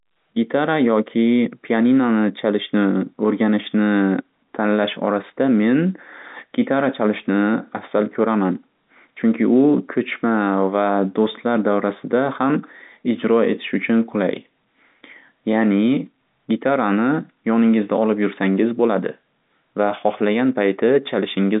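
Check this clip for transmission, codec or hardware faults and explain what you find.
No transmission, codec or hardware faults turn up in this clip.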